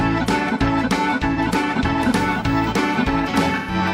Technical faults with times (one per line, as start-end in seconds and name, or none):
1.33-1.40 AAC frame loss with concealment
3.55-3.74 AAC frame loss with concealment